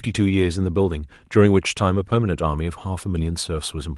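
No faults can be heard in the speech: it arrives through a call path working as expected, with the ordinary coding character of a voice codec and a high end that stops at about 12 kHz, which fits Opus running at its usual call settings.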